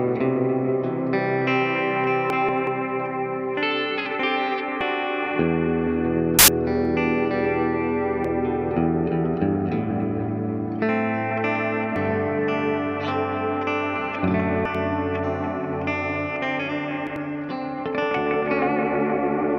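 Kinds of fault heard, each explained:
Compressed frames skipped: whole chunks of the encoded stream never get played, so the audio lurches forward, by anything from about a tenth of a second to nearly half a second here, six times over.
Corrupt FLAC frame: damaged bits went through unchecked, so the decoder's prediction runs on garbage. Around 6.4 to 6.8 s that's an error peaking near about -4 dBFS, long enough to suggest several consecutive frames were hit, then clean audio returns.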